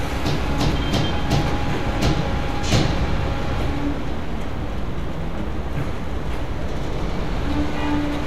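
No technical faults can be heard at any point in this recording of sounds.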